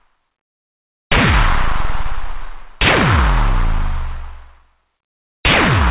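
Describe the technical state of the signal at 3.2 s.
At 3.2 s the sound is intact, carried through a call path whose band stops at 4 kHz, which fits a narrowband 64 kbps G.711 mu-law link.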